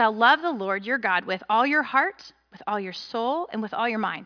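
Nothing goes wrong anywhere in this bit of speech, so there's no fault to point to here.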